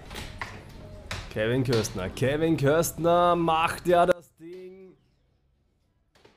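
The wanted signal was likely lost upstream while the path after the break stayed live, producing an audio dropout to a faint residue at 4.12 s. The sound cuts out abruptly in mid-flow rather than pausing or fading, and it never recovers: from that point to the end, all that remains is faint sound, roughly 25 dB below the signal's normal level, against the full-level audio before the break.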